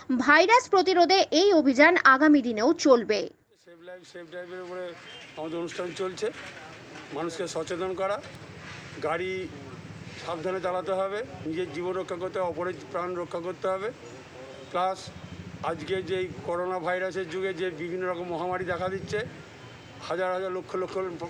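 A single sharp snap at 8.35 s, lasting only a couple of milliseconds and peaking at about -30 dBFS, sits on top of the sound. This is an electrical switching spike, likely from a nearby switch, motor or static discharge arcing briefly and coupling into the audio line. The underlying audio carries straight through the snap without a gap or stutter, which is what separates it from a digital dropout or buffer click.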